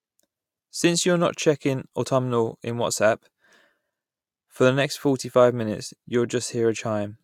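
No technical faults are audible anywhere in the recording.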